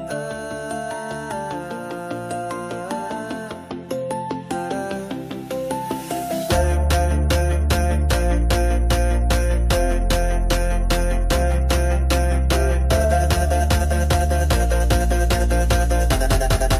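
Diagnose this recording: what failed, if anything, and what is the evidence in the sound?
Nothing failed; no fault is audible anywhere.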